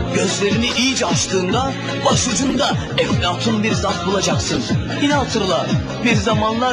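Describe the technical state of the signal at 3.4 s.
At 3.4 s the signal is intact, with no audible dropout, distortion, glitch or other technical fault at that moment.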